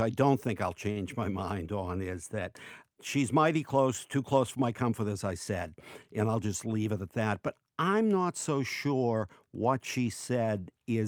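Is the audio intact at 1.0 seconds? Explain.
No, not quite: a short stall from a late packet runs from 0.91 to 0.99 s, ending right at the 1.0 s mark. A packet missed its playout time, the jitter buffer ran dry, and the receiver stretched the last bit of speech by 48 ms until the packet arrived, then carried on from the same point. Nothing is lost, but that sound is held unnaturally long, with a faint buzz or dip, and everything afterward plays 48 ms later.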